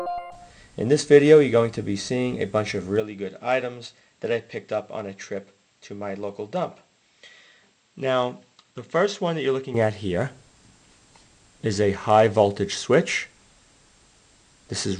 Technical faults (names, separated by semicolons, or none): input switched to a poorer device